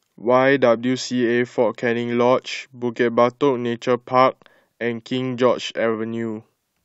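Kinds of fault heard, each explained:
No faults can be heard in this recording.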